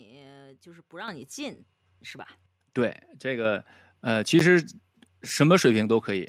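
At 1.08 s and again at 3.45 s the microphone volume is stepped up, by about 8 dB and then about 5 dB. The input gain was raised in one jump, so speech and background noise get louder together and stay there, unlike a talker simply raising their voice.

At 4.39 s a block of digital silence of about 11.6 ms, which fits a 512-sample buffer, cuts the audio out with no fade. The hard edges make it a brief tick rather than a smoothed dropout.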